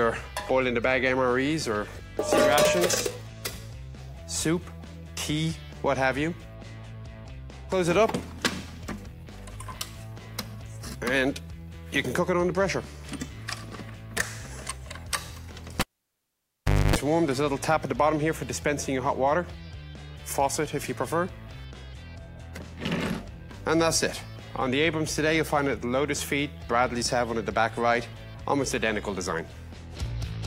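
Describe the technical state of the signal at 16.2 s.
At 16.2 s you're inside a cable pulled and plugged in event, running 15.80 to 16.96 s. A live lead comes out with a pop, leaving about 1.1 s of near silence. Then there's roughly 0.27 s of 50 Hz buzz while only the tip touches, and a second pop as it seats.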